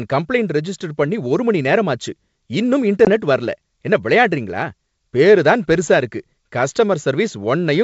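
At 3.05 to 3.10 s, packet loss on the ADPCM call drops about two packets and knocks the decoder's predictor out of step: a hard 20 ms hole, then slightly distorted speech.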